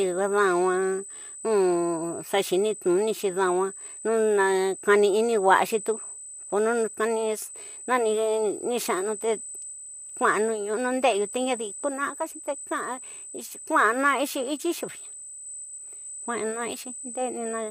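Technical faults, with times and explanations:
throughout: USB whine. Current drawn by the USB bus in 125-microsecond microframes is leaking into the audio through the power or ground path, and it sounds like a steady, fixed-pitch whine at 8 kHz sitting over the speech. It is fairly strong, roughly 15 dB below the speech, so the high, thin tone stays audible during pauses. Its 8 kHz pitch matches the microframe rate rather than the slower 1 ms frames.
throughout: low-delay AAC compression. The speech is plainly rough and grainy, with a noisy fill between the pitch harmonics and nothing at all above 15.6 kHz. The likely cause is a low-delay codec such as AAC-ELD, as used in video calls. The amount of damage points to a low bitrate around 32 kbps.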